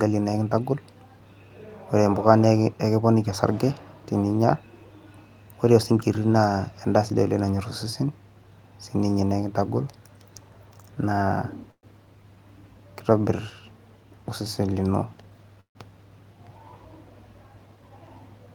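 At 11.71 to 11.86 s, and again at 15.61 to 15.78 s, comes a call audio freeze. The speech stops, a fading buzz carries the last sound on, and then there are about 70 ms and 110 ms of silence. The likely cause is packets held up in transit while the jitter buffer ran dry. Unlike a dropout, nothing is lost: the speech resumes where it stopped, roughly 116 ms and 145 ms later. At 15.06 to 15.57 s, just after "osesen lino", and at 17.71 to 18.47 s, a jitter buffer speed-up makes the speech hurried at 113 % and then 108 % speed. Repeated pitch-period-sized cuts trim about 70 ms each time. The pitch stays put, which separates this from a resampling or pitch-shift fault.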